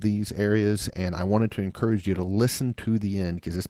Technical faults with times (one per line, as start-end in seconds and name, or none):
none